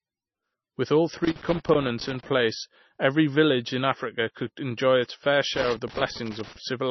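From the first moment the speech sounds dull and watery: nothing reaches above about 5.9 kHz, s sounds turn into metallic chirps, and consonant onsets smear. This is heavy MP3 compression, likely from an encoder starved of bits, which fits a very low bitrate around 25 kbps. It cut the treble at a fixed point and let weak frequency lines flicker between frames. A plain low-pass filter would dull the sound just as much, but it would not add the swirling.

From 1.24 to 2.29 s an irregular burst of crackle and scratching breaks through: loose connector crackle. A worn or dirty contact kept making and breaking, chopping the signal. It happens again from 5.55 to 6.56 s, right after "could enjoy its fair". The bursts are uneven and last about a second each, which sets them apart from the steady, evenly spaced ticks of clock or buffer faults.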